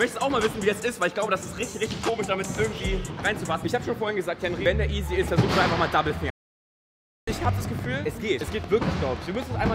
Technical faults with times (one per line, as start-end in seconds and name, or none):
5.16-9.65 train of clicks
6.30-7.28 playback stall